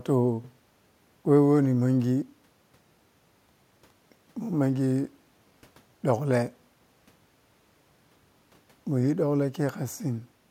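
A short stretch of speech with nothing technically wrong to point to anywhere in it.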